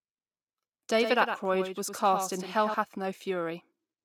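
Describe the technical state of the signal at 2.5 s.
At 2.5 s the speech carries a doubled audio track, present from 0.98 s to 2.74 s. A second full-band copy of the signal runs around a tenth of a second behind the original, roughly 10 dB quieter, with no decay or room colouring. This is likely from the audio being captured again through a slower path and mixed back in. It sounds like a dry, slapback echo trailing each syllable, and it ends abruptly at 2.74 s.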